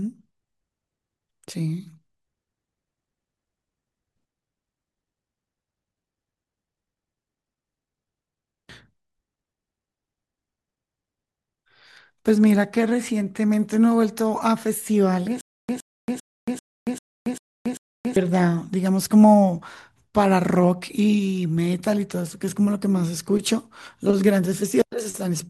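From 15.41 s to 18.16 s the speech breaks into a stutter with silent gaps. A fragment of about 114 ms plays, then about 279 ms of dead digital silence follows. The cycle repeats every 394 ms, seven times in all. The even rhythm points to a likely stall in playback or streaming: each retry replays the last buffered fragment and then runs dry. Whatever audio belonged to that stretch never plays and is lost.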